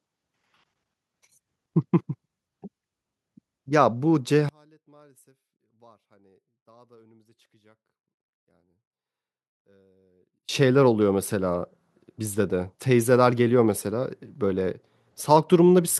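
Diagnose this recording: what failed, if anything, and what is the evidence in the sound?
Between 4.49 and 10.49 s the speech collapses by about 35 dB to a faint residue. That points to one channel inverted, likely a polarity swap in the analogue wiring, so the shared centre cancels in mono. Unlike a dropout or mute, a difference signal survives.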